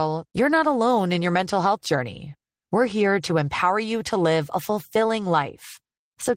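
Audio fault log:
No faults heard anywhere in this speech recording.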